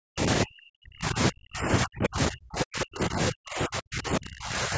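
From 0.0 to 4.77 s the speech repeatedly dips, thins and breaks into fragments, falling by as much as about 40 dB across around four seconds, all within the call's 8 kHz band. This is speech suppressed in double talk, likely from an echo canceller mistaking overlapping talk for loudspeaker echo and attenuating the near-end voice.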